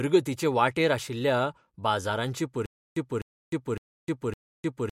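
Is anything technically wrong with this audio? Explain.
Yes. From 2.66 s to the end, after "वाटेर आशिल्ल्या बाजारांचे", there is stutter with silent gaps: a 253 ms burst repeats four times, each followed by 306 ms of digital silence. This is likely a stalled stream replaying its last buffer, and the intervening speech is lost.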